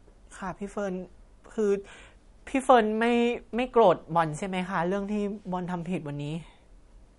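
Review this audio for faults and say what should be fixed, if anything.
Throughout the speech, nothing is present above 11.1 kHz and codec damage is plainly audible, likely from MP3 compression at a bitrate that fits about 48 kbps. Short of bits, the encoder truncates the treble and discards weak frequency lines frame by frame. To prevent it, encode from the original source at a higher bitrate or use a lossless format.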